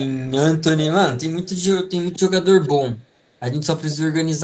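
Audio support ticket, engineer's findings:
Echo leak: faint delayed copy of the speech at 1.4–1.6 s, 1.87–1.91 s and 2.09–2.18 s, much stronger burst at 2.61–2.71 s. Lag about 435 ms, steady. Likely a far-end loudspeaker echo canceller letting residual pickup through. Spectrogram: ghost harmonic traces repeating earlier formants, offset about 0.44 s, barely visible except the last, which sits roughly 10 dB below the speech. All content, including the echo, stops at 8 kHz.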